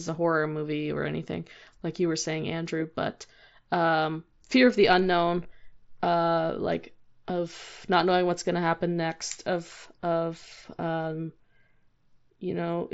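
Concealed Bluetooth headset packet loss occurs at 5.43 s, where about 15 ms of speech, which fits two lost headset frames, went missing between headset and phone. The receiver bridged the gap by repeating the closest-matching recent waveform, leaving a brief buzzy smear within the light grain of the wideband mSBC link.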